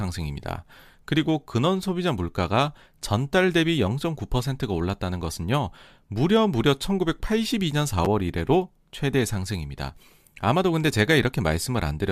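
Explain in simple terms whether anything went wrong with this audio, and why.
Chunks out of order at 8.05 s: a tiny 5.33 ms slice of the speech arrived late and played two slices after its proper place. Nothing is missing, but the order is scrambled, so you hear a brief jumbled moment there.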